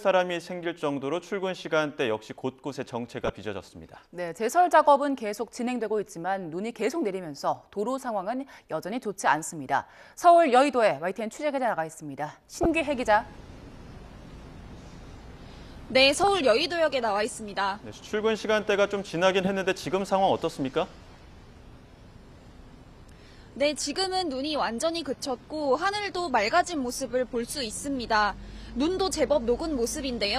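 You'll catch four short blips, at 3.25 to 3.30, 12.63 to 12.66, 16.24 to 16.28 and 19.45 to 19.47 s. Each is a corrupt frame decoded: damaged bits played anyway, throwing energy to wrong frequencies as a chirpy burst, loudest near 12.6 s at about -10 dBFS.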